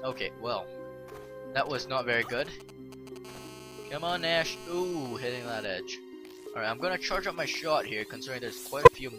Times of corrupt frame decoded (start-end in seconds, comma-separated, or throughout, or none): 8.80-8.96